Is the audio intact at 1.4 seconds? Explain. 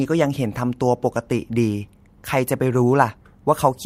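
Yes, the audio at 1.4 s is intact, with no dropout, distortion or other fault at that point.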